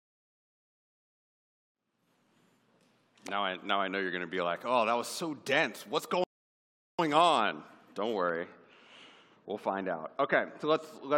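A rebuffering stall at 6.24 s: playback ran out of downloaded audio, fell silent for about 0.75 s, then resumed exactly where it stopped. De-emphasis applied wrongly from 8.29 s to the end: a treble cut that was not needed slopes the highs down about 13 dB at 10 kHz, leaving the sound dull and muffled.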